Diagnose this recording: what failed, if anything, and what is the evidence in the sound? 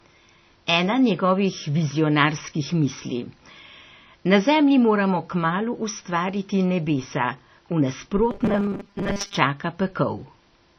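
The codec stage is the likely culprit for damage heard across the whole clip: it sounds like MP3 compression at a low bitrate, roughly 25 kbps. Weak spectral detail drops in and out frame to frame, giving a watery, swirling texture. Unlike a plain low-pass filter or a narrowband phone channel, the damage fluctuates rather than simply removing the treble.

From 8.31 to 9.37 s, just after "kmalu ustvariti nebesa v", the speech turns into a rigid metallic buzz at 200 Hz. That is robotic sound from repeated short buffers, likely a driver or buffer stage starving for data. A 200 Hz buzz fits a 5 ms chunk being replayed, with about half of that stretch made of repeats while real audio is skipped. Codec swirl has no fixed pitch, but this buzz holds one constant pitch while loosely tracking the speech.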